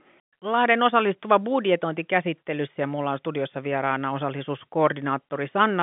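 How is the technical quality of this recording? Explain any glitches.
Nothing stood out on listening: the speech comes through as ordinary G.711 telephone coding, with its content stopping a little below 4 kHz, and there was nothing further to explain.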